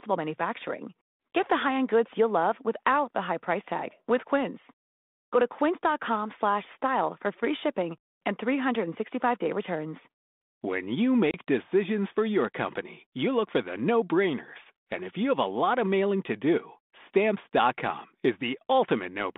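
At 11.31 s packet loss on an ADPCM call drops a few packets, about 30 ms of audio, and the decoder's adaptive predictor and step size lose track of the sender's. A hard-edged gap of silence runs to 11.35 s, then the speech returns slightly distorted before it settles, over the light coding damage of the 32 kbit/s G.726 line.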